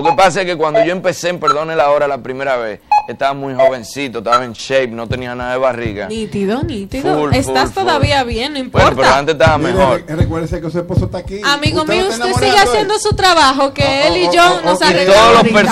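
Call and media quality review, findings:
No audible faults found; nothing to action.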